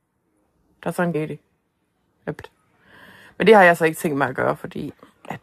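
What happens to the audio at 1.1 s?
Right after "er sådan en", at 1.14 s, there is damaged data in a compressed stream. A short stretch of the coded speech is corrupt. The decoder misreads it, loses frame sync and hunts for the next header. This leaves a brief glitch.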